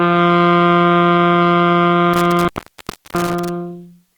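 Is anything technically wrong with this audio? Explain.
Yes. Intermittent contact between 2.13 and 3.49 s: a loose plug or cable breaks the connection, so the sound drops out for about 0.67 s with crackle at the edges, leaving faint hiss.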